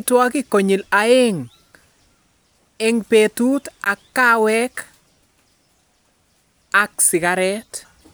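At 3.84 to 3.90 s, between "ing' peetut" and "ak kaaweek", the speech cuts to silence for about 56 ms: a Bluetooth dropout, likely from a packet arriving too late for the headphones. The waveform shows a flat gap, a blank vertical band on the spectrogram, before the speech resumes further along.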